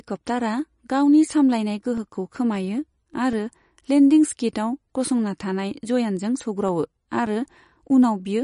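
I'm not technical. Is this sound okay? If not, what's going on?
No. The speech has a watery, swirly quality throughout, with nothing above roughly 10.6 kHz, so it sounds a bit dull. That's MP3 compression damage, likely from the file being squeezed too small, which throws away detail the encoder thinks you won't notice.

There are also CD scratch ticks: a quick run of 11 little clicks from 1.78 to 3.72 seconds, then 8 more from 6.68 to 8.04 seconds. A scratch or blemish on the disc spoils a bit of data on each turn, and the player patches over it.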